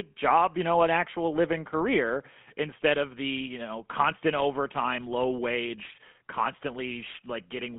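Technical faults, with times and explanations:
Throughout, GSM full-rate codec: the speech sounds buzzy and gravelly, confined to roughly 150 Hz to 3.4 kHz. The vocal tract is modelled and excited by sparse, regularly spaced pulses, a coarse scheme that fits a 13 kbps rate.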